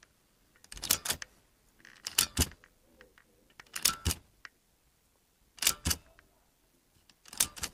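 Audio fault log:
Throughout: block size mismatch (padded). Each block arrives shorter than the next stage reads, and the gap is filled with silence. This adds a buzz at 86.1 Hz, which fits a 512-sample read. The sound plays at 0.861 times its speed, while its timbre stays.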